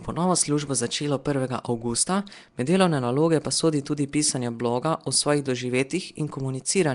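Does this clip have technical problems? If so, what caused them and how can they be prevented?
Yes. Throughout, the speech has a rough, hissy halo and smeared underwater quality, with nothing above 10.6 kHz, likely Nellymoser compression at a rate fitting about 44 kbps. Unlike MP3 swirl, the noise-filled bands give a hiss. Record with a modern codec such as Opus.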